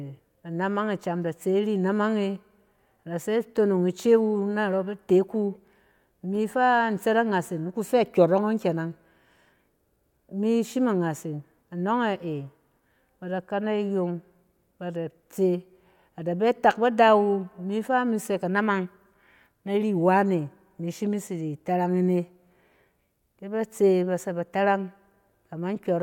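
A speech recording with nothing technically wrong with it.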